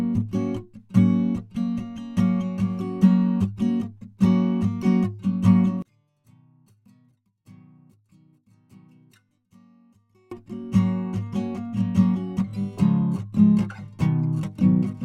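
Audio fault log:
5.82–10.31 s one channel inverted: music falls about 32 dB to a faint residue, likely a polarity flip cancelling shared content; waveform shrinks, spectrogram dims sharply.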